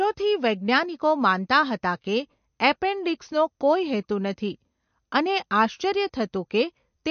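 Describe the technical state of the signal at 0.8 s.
At 0.8 s, like the whole clip, the speech sounds watery and dull, with nothing above 6.5 kHz. That's likely MP3 compression at a low bitrate, around 45 kbps, dropping weak frequency lines.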